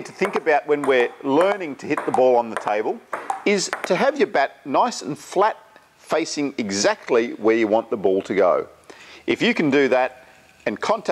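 No technical faults can be heard in this audio.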